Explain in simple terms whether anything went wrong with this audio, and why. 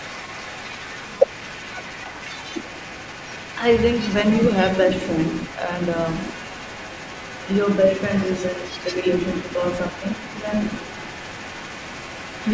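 Yes, two things went wrong. The other side's voice is leaking through, faintly, under the speech from 0 to 4.8 s and again from 4.96 s to the end. A loudspeaker echo the canceller missed is the likely cause. There is also speech suppressed in double talk between 1.09 and 1.41 s, where the voice briefly dips, likely because both sides spoke at once.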